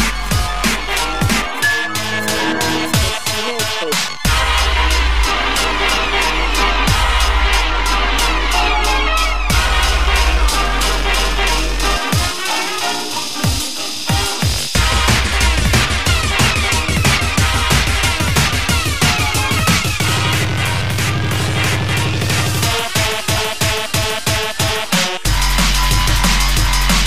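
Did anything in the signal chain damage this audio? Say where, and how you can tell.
No, nothing I can hear points to damage at any stage of the chain.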